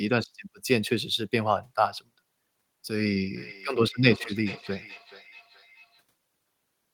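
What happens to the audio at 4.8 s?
At 4.8 s the speech is trailed by a faint, thin, ringing copy of itself that comes back roughly every 0.4 s, sitting about 18 dB below the direct sound. This is feedback echo between two devices, running from 3.36 s to 6.04 s: a second device in the room plays back what the first microphone sent, that microphone picks it up again, and the echo canceller can't remove sound it didn't play itself.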